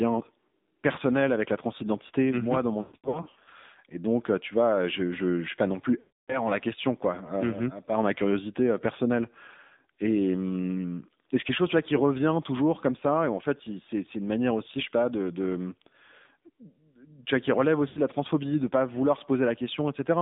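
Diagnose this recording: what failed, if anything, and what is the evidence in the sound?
The codec stage failed: this is speech passed through the AMR narrowband mobile codec. The band runs only from about 150 Hz to 3.7 kHz, and the voice has a plainly audible buzzy, synthetic edge, which fits the low 7.4 kbps AMR-NB mode. A plain telephone band-limit would dull the voice without this coarse, modelled texture. That texture comes from rebuilding each frame from a vocal-tract filter and a few excitation pulses.

Lost AMR speech frames are a network or radio fault that shows up at the decoder. From 2.82 to 3.49 s, right after "transidentité mhm moi dans", losses are scattered across about 0.64 s. The longest gap is about 120 ms. Each gap is smeared. From 6.00 to 6.47 s, between "suis pas non plus" and "la question quoi", the sound draws out and dies away. A short dip follows at 17.88 s, after "tu vois qui relève". 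In each case the decoder repeats the last good pitch and filter settings at falling gain. A clean dropout would be silent gaps with hard edges, not this fading, warbling fill.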